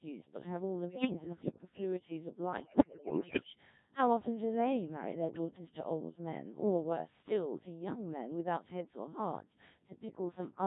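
Robotic, buzzy speech runs through the whole clip, with a smeared, synthetic quality and no natural texture in the voice. This is the Codec 2 vocoder at heavy damage, and the coarseness points to one of its lowest modes, around 1.3 kbit/s. Rather than carrying the waveform, the codec sends only pitch, voicing, energy and a rough spectral outline, and the decoder rebuilds the voice from sine waves. The result is plainly artificial.

From 0.89 to 1.58 s the voice lurches in pitch and loudness and its tone colour shifts, with brief warbles breaking through. These are bit errors on digital voice radio, with about 7 percent of bits flipped. Because each bit in so lean a stream sets pitch, level, voicing or spectrum for a whole frame, even scattered errors produce audible jumps across a run of frames.

From 2.60 to 3.47 s the corruption is much worse, with around a fifth of the bits wrong. The voice dissolves into bleeps, warbling and robotic gibberish as successive frames are rebuilt from garbage parameters.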